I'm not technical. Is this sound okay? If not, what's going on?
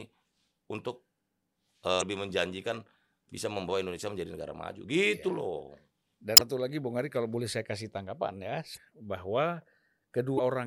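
No. At 1.98, 6.34, 8.73 and 10.35 seconds, brief glitches cut into the speech. That is damaged data in a compressed stream: the decoder stumbles on corrupted bits and loses its place, unlike dropouts, which simply go silent.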